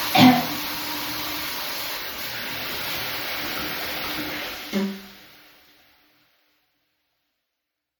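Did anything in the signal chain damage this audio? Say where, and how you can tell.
Yes. The codec stage, likely MP3 compression near 64 kbps, runs short of bits, cuts the treble and drops weak detail, leaving a watery, swirling texture throughout.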